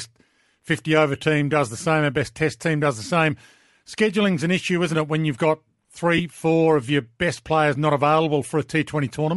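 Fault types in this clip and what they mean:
Bluetooth LC3 compression: Throughout the clip the speech has a breathy, grainy edge. That texture is likely the work of the LC3 codec used by Bluetooth LE Audio. It codes sound in short transform frames, consistent with 7.5 ms frames, and at a rate that fits roughly 48 kbps it cannot afford every high-frequency detail. Much of the top of the spectrum is zeroed and refilled with shaped noise, which produces the plainly audible coarseness heard here.
Lost LE Audio frames: Between 6.18 and 6.20 s, after "it when you've got" and before "four of your best", there is a brief smeared, noisy patch. Some 15 ms of audio went missing, which fits two 7.5 ms frames dropping out of the Bluetooth link. The decoder covered the gap by repeating the last good spectrum with scrambled phase, so the sound turns into a short hiss-like blur rather than falling silent.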